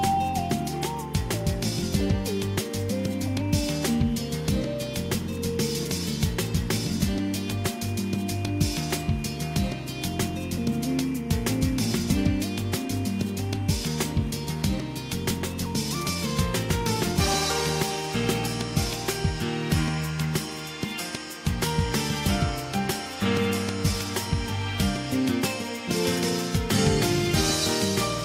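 Timecode bleed runs through the whole clip: linear timecode has leaked in from a neighbouring track or cable. Its square wave flips between roughly 1 kHz and 2 kHz, about 25 dB under the sound, with a chirping warble that fits 24-frame code.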